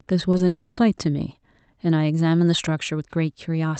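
Speech, with three breaks packed into the first second. At 0.31 to 0.35 s and again at 0.37 to 0.41 s there are two brief smeary wobbles, each about 20 ms, where the sound is stretched from what came just before and then blends back into the real signal. This is short concealed packet loss: the decoder lacked those few hundredths of a second and patched them by extending the preceding pitch or noise. What sets it apart from a dropout is how short each patch is and the clean rejoin, with no audible gap. From 0.47 to 0.79 s, a much longer stretch of about 300 ms, the sound is replaced by a continued buzz or hiss that never falls into silence before the speech resumes further along with that portion missing. This is likely a long network dropout, with concealment still running across the whole hole. Its length and the way it drifts away from the surrounding sound distinguish it from the brief packet-loss smears. 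The call path's coding noise sits underneath, and the top end stops at about 8 kHz, which points to an Opus call at a moderate bitrate.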